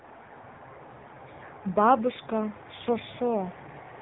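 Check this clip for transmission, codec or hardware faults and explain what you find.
One codec fault runs through the whole clip: the speech has passed through the AMR narrowband mobile codec, heavily damaged. The codec models the vocal tract and excites it with a few pulses per 5 ms subframe, and the coarse result fits a low AMR-NB mode around 6.7 kbps. The voice sounds buzzy, synthetic and muffled. On a spectrogram, energy stops flat at 3.8 kHz with empty space above, and harmonics look smeared.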